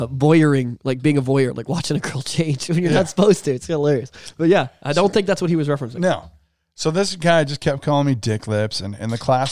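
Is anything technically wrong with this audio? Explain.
No, nothing is technically wrong with this audio.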